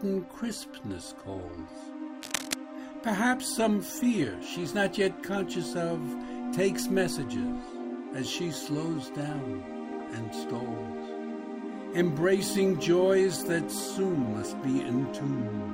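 From 2.22 to 2.54 s, cable scratch noise: dense, uneven crackling about 5 dB below the signal, likely from a worn connector or cable shifting. It shows as ragged broadband specks on a spectrogram.

DAB burbling follows at 9.91 to 10.13 s and 14.13 to 14.28 s. Uncorrected bit errors corrupt sub-band samples, producing short blips of noise in single sub-bands.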